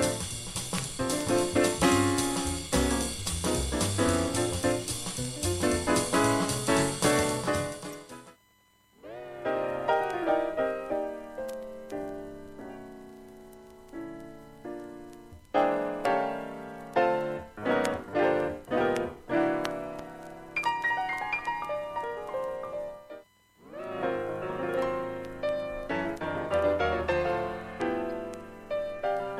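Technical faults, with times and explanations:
7.89 to 7.94 s, corrupt frame decoded: there's a short, odd glitch here, roughly a twentieth of a second long, that doesn't belong to the surrounding sound. It's what you get when a compressed frame arrives with damaged bits and the decoder plays it anyway, so misread values put energy at the wrong frequencies. The length fits a couple of bad frames back to back. It's fairly quiet, peaking somewhere around -35 dBFS.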